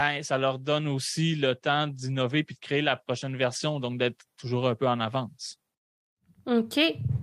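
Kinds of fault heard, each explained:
Clock drift between sender and receiver: the sender's clock runs about 3 percent slow, so the buffer keeps draining, unlike a single dropout that strikes only once.
Repeated timing corrections: from 0.04 to 7.15 s the receiver repeats small pieces, adding roughly 0.3 s and dragging the pace to 97 percent, with the edits unevenly spaced rather than as a steady slowdown.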